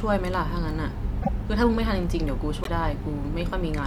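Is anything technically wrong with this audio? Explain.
Yes. At 1.22 to 1.29 s and 2.63 to 2.68 s, the speech skips ahead. This is likely a broken MP3 bit reservoir: after a cut, frames borrow bits from the wrong data. The forward jump, rather than a plain gap, sets it apart from a simple dropout.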